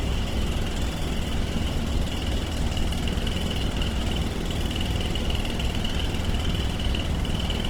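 Throughout, the sound is rough and grainy, with noisy texture filling the bands. This is likely Opus compression in music mode, consistent with roughly 16 kbps.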